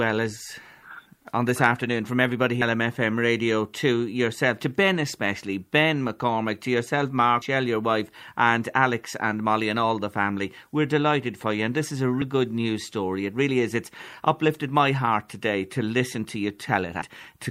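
Speech, where audio is likely missing between chunks: roughly a fifth of a second drops at each 5-second chunk boundary, heard as abrupt skips at 2.62, 7.42, 12.22 and 17.02 s.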